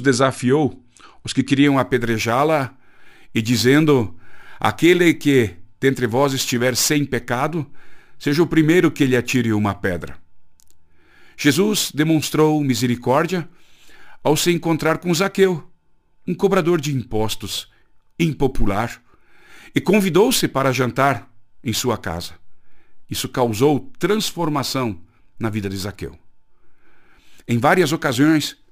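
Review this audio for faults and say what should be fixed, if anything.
Imaging from sample-and-hold upsampling runs from 1.67 s, just after "os que", to the end. Speech at 24 kHz was raised to 44.1 kHz by repeating samples unfiltered, leaving a metallic fizz at 12 to 24 kHz, about 21 dB down. Unlike steady hiss, it swells with the speech and mirrors its pitch inversely.

To prevent it, resample with a proper interpolating low-pass filter instead of holding each sample.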